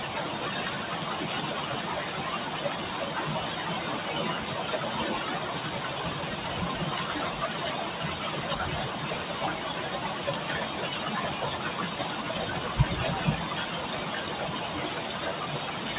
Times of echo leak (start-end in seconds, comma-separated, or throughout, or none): none